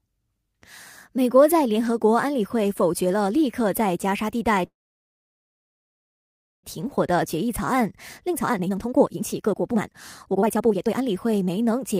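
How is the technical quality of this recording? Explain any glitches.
The recording has two connected glitches, a stall and then a rushed stretch.

At 4.65 s a call audio freeze occurs. The sound halts, goes almost silent for nearly 2 s, and resumes at 6.65 s. It likely came from delayed packets emptying the jitter buffer.

From 6.79 s to 11.95 s a jitter buffer speed-up follows. Speech runs at 137% speed and the same pitch, sounding hurried. The receiver trims tiny pitch-period slices, about two seconds in total, to clear the backlog.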